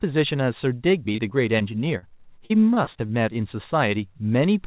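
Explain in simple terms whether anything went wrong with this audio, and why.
Parts of this speech were lost in transit on a call connection whose sound stops at 4 kHz, as a phone line's does. Between 1.12 and 1.62 s, and again between 2.46 and 3.11 s, there is repeated packet loss, which gives a robotic sound. Small chunks of sound kept arriving too late, four times in the first stretch and six in the second. Each gap, up to 38 ms long, was patched by stretching the previous sound, so the speech turns choppy with pieces missing.

From 1.98 to 2.04 s there is one short concealed packet loss. About 40 ms went missing and was filled by continuing the sound just before it. You hear it as a brief smear or wobble rather than silence.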